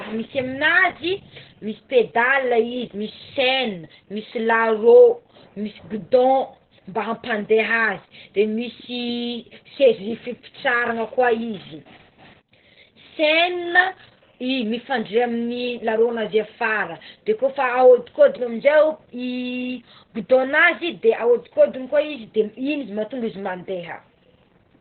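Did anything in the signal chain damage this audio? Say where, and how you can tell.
Yes, at the codec: Opus voice compression running narrowband SILK cuts everything above 4.3 kHz throughout, giving muffled, hoarse, robotic speech consistent with roughly 8 kbps.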